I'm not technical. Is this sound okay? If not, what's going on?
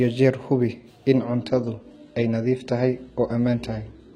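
No. From 1.21 s to the end, the adaptive stream switches to a lower bitrate. The connection slowed, so the player swapped in a cheaper copy of the speech without pausing. The crisp top end above about 11.8 kHz vanishes, and the sound turns duller.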